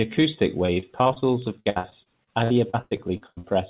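From 0.66 to 1.24 s the speech turns choppy, with small pieces missing. This is repeated packet loss (robotic sound). Audio kept failing to arrive in time, leaving holes of up to 25 ms. Each one was filled by continuing the previous sound, so about 27% of the stretch is patched rather than real.

At 1.42 s there is a single sharp, isolated click. The likely cause is dropped samples: a tiny slice of roughly a few samples vanished, and the waveform jumps straight to a later value. Nothing audible is lost, but the jump itself clicks.

From 1.60 to 3.45 s the robotic chopping returns and is heavier. The gaps reach 97 ms. About 35% of this span is concealment. Throughout the clip, nothing above 4 kHz comes through the call path, which points to the G.711 mu-law codec.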